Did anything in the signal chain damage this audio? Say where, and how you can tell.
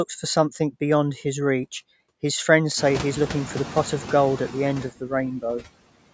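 Yes. The damage is noise suppressor artifacts in the call processing stage. Throughout the speech, the background is pulled down by about 20 dB in the gaps and swells back under the talking. The suppressor attenuates noise bands frame by frame. The room noise rises by about 20 dB near 3 s.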